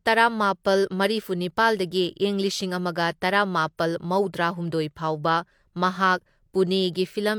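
Speech with clock slip clicks from 0.13 to 7.37 s: a rapid, regular ticking roughly every 30 ms, likely from unsynchronised clocks about 700 ppm apart. Each slip is a single-sample jump in the waveform, showing as evenly spaced thin vertical lines on a spectrogram.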